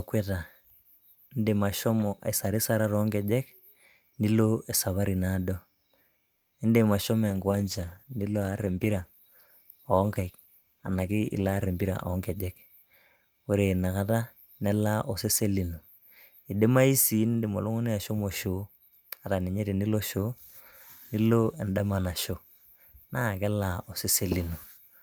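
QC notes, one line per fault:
6.35–6.54 s, call audio freeze: a brief fading buzz fills about 170 ms where delivery stalled, likely a drained jitter buffer; audio resumes intact, unlike a dropout.
7.28–13.88 s, call bitrate drop: encoding falls from 64 to 15 kbps, lowest for about 4.5 s, turning the speech coarse and muffled until recovery before "kata nelaa osesen lino".
10.99–12.44 s, jitter buffer speed-up: speech runs about 11% fast at unchanged pitch as roughly 150 ms of short pitch-period slices are trimmed, sounding hurried rather than chipmunked.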